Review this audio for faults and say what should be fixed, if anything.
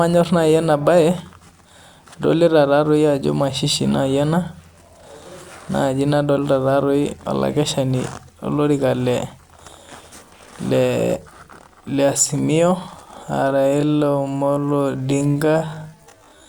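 A time-stretched section runs from 13.40 s to 16.49 s. Software likely lengthened this final stretch to fill a set duration. It plays the audio at 0.53 times its original pace and keeps the pitch by repeating short slices of the waveform. At 13.40 s the pace drops abruptly to about half speed while the pitch stays the same. The speech drags through to the end.

To prevent it, fit the timing by editing or re-recording the material rather than stretching it, or keep any stretch to a small ratio.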